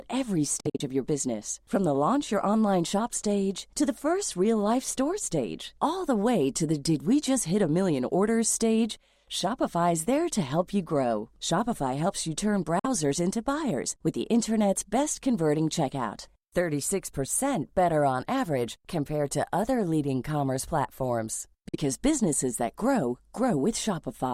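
Speech with a likely Bluetooth dropout: sound cuts out in scattered gaps totalling 116 ms between 0.60 and 0.81 s, then in 46 ms of gaps at 12.79 s and 21.68 s, resuming mid-stream. Waveform and spectrogram show sharp-edged blank vertical bands.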